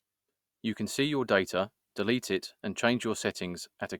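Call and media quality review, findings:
No audible faults found in this speech recording.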